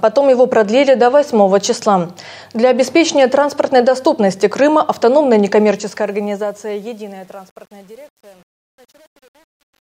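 From about 5.58 s to the end at 9.83 s, the fade-out carries truncation distortion. The fade appears to be computed at low resolution without dither, consistent with an 8-bit stage, so as the level drops the waveform collapses into coarse square steps. From about 6.44 s onward the tail turns gritty. A waveform view shows stair-stepped blocks, and a spectrogram shows broadband hash.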